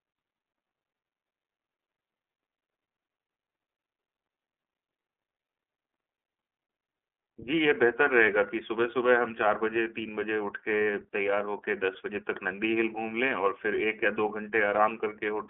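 Throughout, the speech passes through an iLBC codec working on 30 ms frames, coding each frame's excitation independently, which fits its 13.33 kbps mode. The band is confined to about 300 Hz to 3.4 kHz with nothing above 3.7 kHz, leaving the voice muffled, slightly rough and audibly synthetic.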